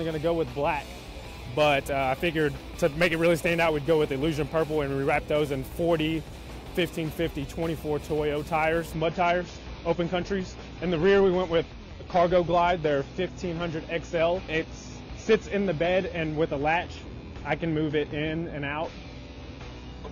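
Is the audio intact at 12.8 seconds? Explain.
No. From 8.93 s to the end, the adaptive stream plays at a lower bitrate, which fits a fallback to 24 kbit/s AAC. The switch is sudden and gapless, with more codec artefacts and nothing above 6.9 kHz.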